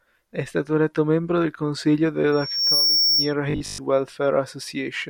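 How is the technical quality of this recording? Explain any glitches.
Two faults mar the recording, both from about 2.3 s on.

From 2.32 to 3.34 s, right after "eletto membro del consiglio", loudspeaker feedback squeal appears. The microphone-speaker loop runs away at 5.5 kHz, swelling over a few tenths of a second to sit a few dB above the speech.

From 3.50 to 3.80 s the speech turns into a rigid, metallic 50 Hz buzz. The likely cause is repeated short buffers: a 20 ms slice replayed over most of that stretch while fresh audio is lost.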